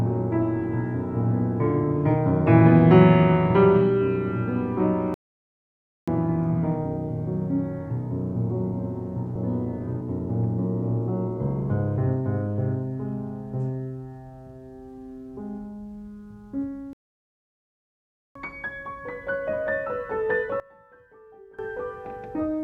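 At 5.14 s the sound cuts out mid-flow and stays silent for about 0.93 s, resuming at 6.08 s. A longer gap follows at 16.93 s, where output stops for about 1.42 s before returning at 18.35 s. Both silences are a playback stall, likely the player running short of data or having its thread blocked, so nothing reached the output until it recovered.

From 20.60 s to 21.59 s the level suddenly falls by about 22 dB, leaving a faint remnant of the sound for roughly a second. This is likely one channel inverted: with one stereo side in reversed polarity, whatever the two channels share cancels when they are combined to mono, and only their small difference remains audible.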